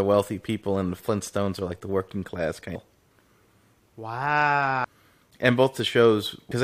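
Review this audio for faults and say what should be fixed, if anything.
Two brief glitches break into the speech at 4.83 s and 6.50 s. This is damaged data in a compressed stream: corrupted bytes made the decoder misread those frames and lose sync until it found the next valid frame header. Re-encode from an intact source and transfer with checksums to prevent it.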